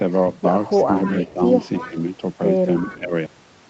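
Speech, with two call-path faults. An echo leak shows up as a delayed copy of the other voice from the loudspeaker side at 0.74–0.85, 1.03–1.33, 1.80–2.03 and 2.75–2.97 s, trailing it by about 0.3 s and sitting roughly 15 to 20 dB below the speech. This is likely an echo canceller that failed to remove all of the loudspeaker sound its microphone picked up. On a spectrogram the echo appears as weaker harmonic traces repeating the earlier pattern, shifted about 300 ms to the right. Speech suppressed in double talk appears as dips at 1.12–1.18, 1.34–1.42, 1.80–1.96 and 2.87–3.13 s, where both voices overlap. The dips deepen from about 5 dB in the first two to about 10 and then about 15 dB. The likely cause is the canceller failing to separate its own talker from the echo and turning both down. In the waveform these show as short pinches in the envelope, and on the spectrogram as dimmed bands across the harmonics. 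Throughout, the spectrogram shows nothing above 8 kHz, as expected from the call's codec bandwidth.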